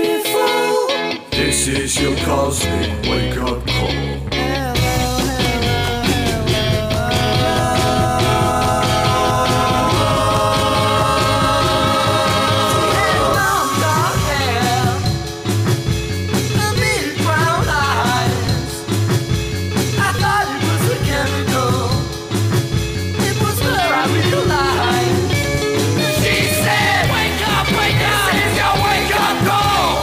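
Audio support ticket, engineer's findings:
No faults found in this audio; nothing to report for the engineer's findings.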